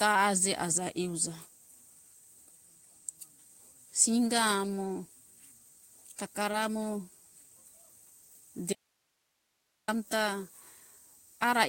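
At 6.51 to 6.55 s there is a short concealed packet loss. About 20 ms of the speech never arrived in time, and the receiver covered the hole with roughly 19 ms of synthesized continuation, extending the preceding sound and then blending back into the real signal. It comes across as a brief smear or wobble. On a spectrogram the spectrum runs unnaturally steady for that sliver, with slightly blurred onsets at the joins rather than a clean gap.

From 8.73 to 9.88 s, a stretch of about 1.15 s, the speech is replaced by an audio dropout to a faint residue. The signal cuts out abruptly and leaves only hiss, much lower than the speech, at a rough level of 50 dB below it. The likely cause is a loss of the wanted signal while the path downstream stayed live. A waveform shows a sharp edge down to a thin noise floor and back. The spectrogram shows a uniform grey band with no harmonic structure.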